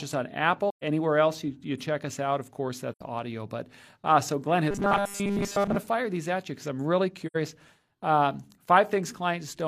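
At 0.69 s, between "us on" and "else you you check", the speech drops into a soft-edged hole lasting until 0.83 s. This is AAC frame loss with muting. The decoder zeroed the spectrum of the missing blocks, and the overlapping windows fade the sound down and back up rather than cutting it. The 128 ms gap fits three lost frames. The same happens at 2.91 to 3.01 s and at 7.26 to 7.36 s, just after "you because I'm really", each about 85 ms, consistent with two frames. On a waveform these show as tapered dips to near-silence. On a spectrogram they are clean vertical blank bands with faded rather than hard edges.

From 4.71 to 5.76 s, ending just before "fire these at you", the speech turns into a rigid, metallic buzz that still roughly follows the phrasing. This is robotic sound from repeated short buffers, likely caused by audio arriving too seldom so that the last few milliseconds were replayed to fill the time. 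The buzz sits at 200 Hz, which means a 5 ms stretch was repeated, and most of the real audio in that span was skipped. A spectrogram shows evenly spaced horizontal harmonics at multiples of 200 Hz in place of natural pitch movement. The waveform shows a short, near-identical cycle repeating.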